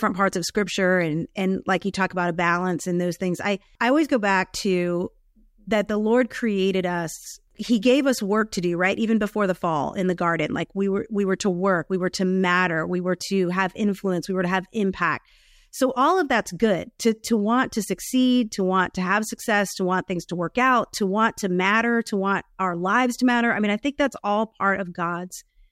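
Nothing here stands out as a technical fault; the speech runs along from the opening moment to the last without anything going wrong that a careful listener would catch.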